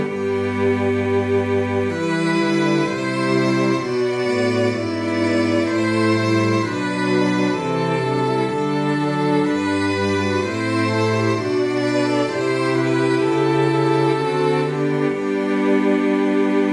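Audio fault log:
No fault is heard in this clip.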